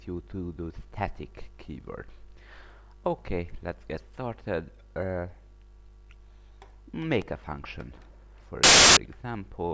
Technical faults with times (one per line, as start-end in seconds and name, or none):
8.63-8.97 file tags played as audio